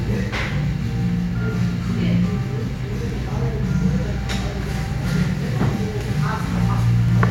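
A clip of everyday sound with periodic USB or driver dropouts. Something in the system stalls the USB bus or audio driver every 1.99 s from 3.1 s to 7.1 s, and each time around 10 ms of audio is skipped outright, leaving about three regular ticks in the sound.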